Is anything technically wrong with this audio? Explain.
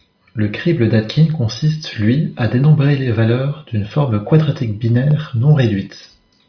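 No, nothing technically wrong can be heard in this speech recording. It carries no audible faults.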